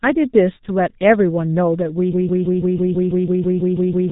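Speech heavily damaged by the G.723.1 codec runs through the whole clip. It sounds muffled and hoarse, with smeared consonants and a slowly updated voice model. The quality fits that codec's 6.3 kbit/s mode, and a spectrogram shows a hard ceiling with nothing above 3.8 kHz. From 2.13 s to the end, a broken-record loop repeats one 164 ms fragment about twelve times back to back, so the audio that should have played there is lost. The likely cause is a stalled player or stream resending its last buffer. On the waveform this appears as identical blocks tiling every 0.16 s, and on the spectrogram as a repeating vertical pattern.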